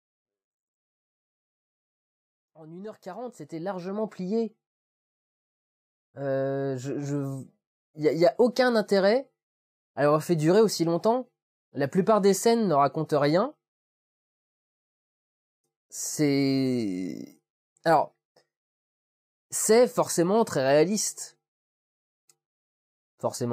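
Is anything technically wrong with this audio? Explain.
No, nothing is technically wrong: the only level change is a smooth fade-in from the very beginning that reaches full level at about 4.37 s, with no click or hard edge.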